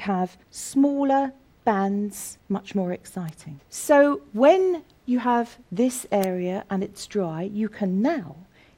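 At 3.29 s and again at 6.24 s a bit error spike gives one sharp, full-band tick, each a single sample flipped by a power of two, peaking at about -15 dBFS and then about -3 dBFS. Unlike a dropout click, no sound goes missing around it.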